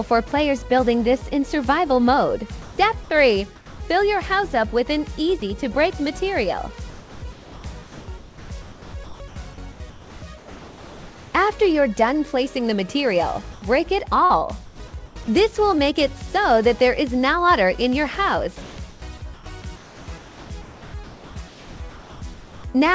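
From 3.56 to 3.80 s the background, sitting about 20 dB below the loud parts, gives way to comfort noise in place of the background, likely because the sender's voice detector stopped transmitting and the receiver synthesised a stand-in. The fill is steady and featureless and only about 1 dB quieter, so it is heard as a smoothing of the room rather than a drop. On a spectrogram the textured background turns into a uniform, structureless wash.

At 5.40 s there is a brief instance of sound dropped by the voice detector. About 10 ms of sound vanishes into a 20 ms patch of noise, likely because the detector mistook that quiet sound for background. It is heard as a tiny gap filled with steady noise.

The same comfort-noise substitution recurs from 6.90 to 7.64 s, and then again in patches totalling about 2.2 s across 8.18 to 11.34 s, each likely the sender going quiet during pauses. The background flattens each time and then regains its detail. 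On the spectrogram these show as smooth blocks separated by stretches of finer grain, all stopping at 8 kHz, where the G.722 call path cuts off everything above.

From 14.26 to 15.28 s the sound is chopped by the voice detector, likely because it toggled between sending and not sending more than once. About 0.3 s in total is swapped for fill, so parts of the sound drop out. The waveform shows notches of flat noise cut into the envelope, and the spectrogram shows alternating textured and smooth slices.

At 18.62 s another stretch of sound is dropped by the voice detector. About 70 ms is lost inside a 160 ms replacement, likely a quiet portion misjudged as background. From there to 22.22 s, comfort noise again stands in for about 2.3 s of the background, likely as transmission paused. The result is a smooth, even hiss, which appears as a smooth band on the spectrogram and a flat envelope on the waveform.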